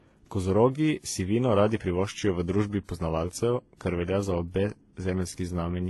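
A short speech recording carries layered compression damage throughout: the artefacts of one codec are heard together with those of a second, and nothing is present above about 11.8 kHz. The likely cause is transcoding between lossy codecs, consistent with a low-rate HE-AAC stage around 16 kbit/s being re-encoded to WMA at about 64 kbit/s. On a spectrogram, the stacked encodes show as a hard ceiling at 11.8 kHz and blotchy, smeared high bands.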